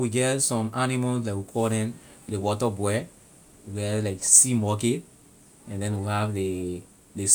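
Speech recording with no audible technical faults anywhere in the clip.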